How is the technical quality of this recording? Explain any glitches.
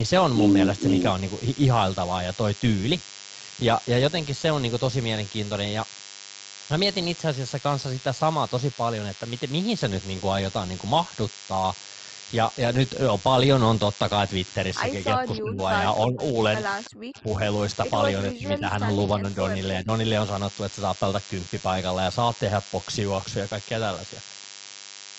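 The recording is marred by a constant buzz and a cluster of call-processing glitches between 15 and 20 s. The speech band stops at 8 kHz, consistent with a wideband Opus call path.

DECT cordless phone buzz runs through the whole clip. A nearby DECT handset or base station emits radio bursts every 10 ms, which the audio circuitry rectifies into a thin 100 Hz buzz about 20 dB below the speech. On a spectrogram it appears as evenly spaced horizontal harmonic lines at multiples of 100 Hz.

Speech suppressed in double talk occurs at 15.14–15.61, 16.06–16.35, 16.89–17.4, 18.33–18.9, 19.17–19.38 and 19.8–19.9 s. The speech dips by about 10 to 40 dB, deepest at 16.89–17.4 s. The likely cause is an echo canceller ducking the talker while the far side spoke. The waveform envelope shows sudden notches, and the spectrogram shows brief faded gaps.

Echo leak appears at 15.37–15.42 and 16.85–16.9 s. 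Faint scraps of the voice return 323 ms late, about 20 and 30 dB below the speech. This is likely residual loudspeaker echo that the canceller failed to remove. A spectrogram shows weak, shifted copies of earlier speech patterns.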